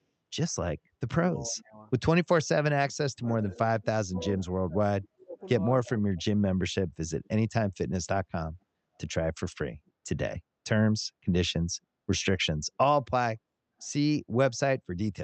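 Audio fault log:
1.33–1.81 s, 3.09–5.39 s, 5.84–6.28 s: speech suppressed in double talk. The speech dips sharply in level. The first dip goes down about 20 dB. The middle stretch is worst, with drops near 35 dB over roughly a second in total. The last dip is brief but deep, about 30 dB. Both sides were likely talking at once. The echo canceller could not tell this talker from the returning echo, so it turned everything down.
3.29–3.55 s, 4.19–4.42 s, 7.24–7.28 s: echo leak. A faint delayed copy of the speech comes back 285 ms after the original. It sits about 15 dB below the speech at first, then about 25 dB, then a short scrap near 35 dB down. One side was likely on a loudspeaker, and its echo canceller left some residue, which was sent back. The first two leaks fall inside the middle double-talk stretch, where cancellation struggles most.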